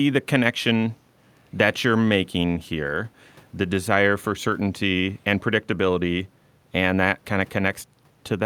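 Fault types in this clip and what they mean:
Nothing in this speech recording stood out as a problem on listening.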